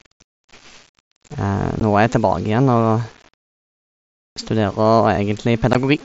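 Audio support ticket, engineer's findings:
Grainy, signal-following distortion across the whole speech clip, roughly 30 dB under the voice, gritty on quiet tails. Likely low bit depth without dither: samples rounded to about 7 bits, so the error tracks the waveform instead of sitting as a steady hiss.

Unconcealed Bluetooth headset packet loss at 1.80 s: hard-edged hole of about 15 ms. Fits two dropped headset frames on the link, gap left as silence or an idle pattern, nothing patched in.

Same thing at 5.73 s: another roughly 15 ms abrupt dropout, two frames' worth, unconcealed. mSBC wideband itself is audible as the usual light grain on loud parts.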